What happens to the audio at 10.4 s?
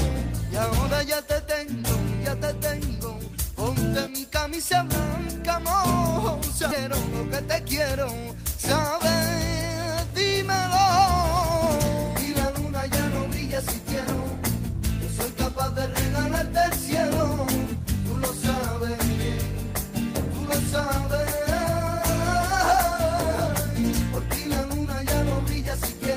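The audio briefly hurries, running about 5% fast at unchanged pitch from 10.10 to 11.66 s. This is a jitter buffer speed-up: after packets piled up, the receiver trimmed repeated pitch-period-sized slices, around 70 ms in total, to cut its excess delay.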